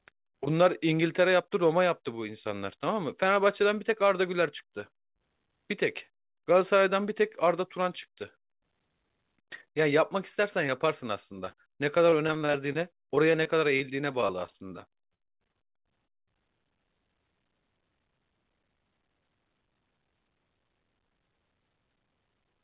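A brief smear at 10.67 to 10.69 s, and another at 10.79 s, mark short concealed packet loss: roughly 10 ms of the call audio arrived too late each time, and the receiver bridged the hole by extending the preceding sound before blending back into the real signal. The same kind of short blip returns at 16.06 to 16.09 s, where about 20 ms was missing and patched in the same way.

Between 11.45 and 15.56 s the speech turns choppy, the sign of repeated packet loss. Packets went missing 28 times across this stretch, about 0.57 s in all, or 14% of it, with the longest gap 58 ms. Each hole was papered over by continuing the previous sound, only for the next loss to follow soon after, so the stretch sounds chopped with pieces missing. Throughout the clip the sound stops at 4 kHz, which fits a G.711 A-law call path.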